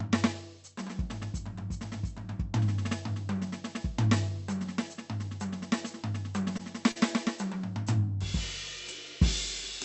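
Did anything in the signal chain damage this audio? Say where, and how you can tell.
Yes, in the network stage of the call path. Around 6.57 to 6.61 s and again at 6.91 to 6.98 s the music briefly freezes. The last sound is held for about 18 ms and then about 44 ms, with a slight buzz or dip, before it resumes. This is a short stall from a late packet: the jitter buffer ran dry and the receiver stretched audio until the packet arrived. Unlike a loss dropout, nothing is skipped and the music continues from the same point, just slightly later.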